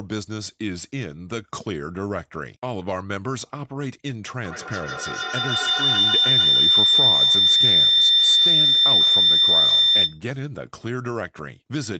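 From 4.44 to 10.25 s, a feedback howl: two devices in the same room form a loop that gains level on every pass, so repeats near 4 kHz grow instead of dying away, repeating about every 150 ms and peaking about 11 dB above the speech.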